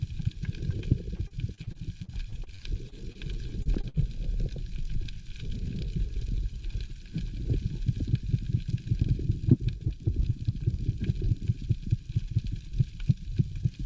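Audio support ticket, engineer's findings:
Choppy, robotic sound from 1.16 to 3.18 s. Repeated packet loss in the jitter buffer. About a dozen short holes, longest 37 ms, each patched by extending the previous sound.

Same repeated packet loss at 3.63 to 3.97 s. Fewer holes, longest 47 ms. Concealment fills roughly a third of the stretch. Path is G.722 at 64 kbps, nothing above 8 kHz.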